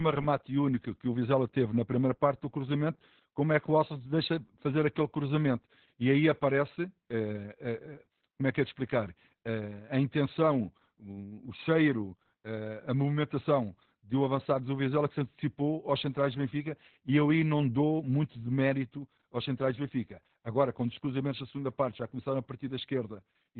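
Throughout the speech, the sound is muffled, hoarse and faintly robotic, with nothing above about 4.3 kHz. This is Opus voice compression in its narrowband SILK mode, which fits a very low bitrate near 8 kbps, with the band cut and the excitation coded coarsely.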